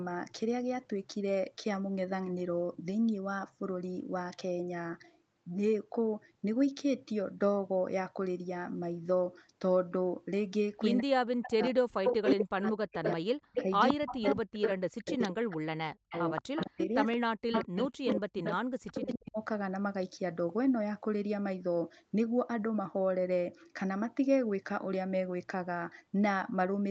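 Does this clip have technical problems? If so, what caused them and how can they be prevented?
Yes. Speech suppressed in double talk runs from 10.99 to 19.39 s. The voice dips and cuts out in pieces, by as much as about 40 dB, for roughly five seconds in total. This is likely an echo canceller that could not separate near speech from loudspeaker echo and attenuated both. A canceller with better double-talk detection, or headsets on both ends, prevents it.

Echo leak is heard from 11.43 to 15.29 s at about the same level as the speech, and from 16.1 to 19.31 s about 5 dB below it. Both stretches are a copy delayed by 176 ms. The likely cause is a loudspeaker on the far end whose echo canceller let part of the microphone pickup through. Using headphones, or tuning that canceller properly, stops the echo returning.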